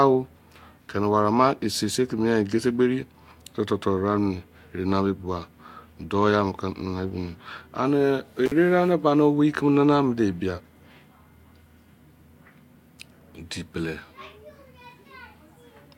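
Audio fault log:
8.46–8.52 s, intermittent contact: the speech drops out for about 41 ms with crackle at each edge. A loose connection briefly opens the signal path.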